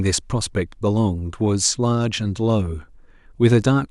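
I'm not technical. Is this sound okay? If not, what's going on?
Yes, nothing in this speech recording points to a technical problem with the signal itself.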